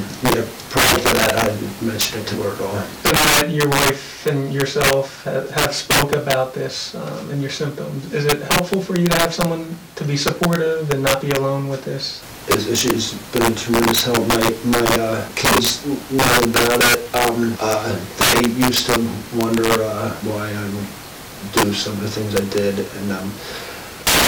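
Violent, sharp cracks burst through the loudest moments of this 24-second clip: integer overflow, where gain pushed about 15 dB too hot wraps a few percent of peaks to the opposite sign instead of limiting.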